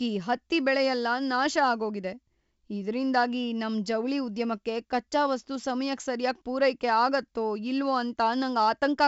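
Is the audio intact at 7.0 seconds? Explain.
Yes, the speech at 7.0 seconds is intact, with no fault at that moment.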